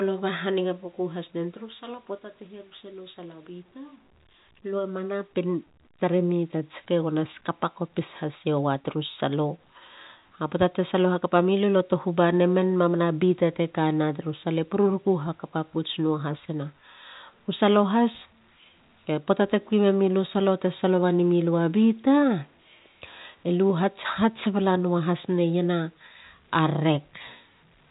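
No faults found; the speech sits on an ordinary G.711 telephone path, band-limited below 4 kHz with the faint level-following quantisation hiss expected of 64 kbps A-law coding.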